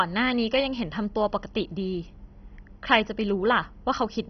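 Throughout, the speech sounds dull, with nothing above 6.1 kHz, and carries a gurgling, granular roughness as upper bands flicker in and out. The likely cause is heavy MP2 compression starving its sub-bands of bits, which fits a rate near 32 kbps.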